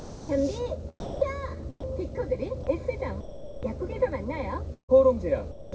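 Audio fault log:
0.00–0.29 s, 3.21–3.63 s and 5.51–5.72 s, sound dropped by the voice detector: the sound gives way to smooth, steady hiss for about 290 ms at the very start, 420 ms in the middle and 210 ms right before the end, then picks up again. The likely cause is the sender's voice detector treating these stretches as background and going quiet, with the receiver filling in synthetic comfort noise until the detector fires again.
1.00–2.67 s, sound chopped by the voice detector: across this stretch the sound keeps cutting in and out, with about 270 ms in total swapped for comfort noise. That choppy on-off pattern is likely the voice detector toggling between sending and not sending more than once.
4.74–4.91 s, burst of packet loss: about 150 ms of audio goes missing. For the first part of the gap the receiver stretches out whatever was playing last, and that fill fades away until roughly the last 110 ms is close to silent. 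The sound then comes back further along with that chunk simply gone. Around all of this you can hear the G.722 call path, which leaves nothing above 8 kHz.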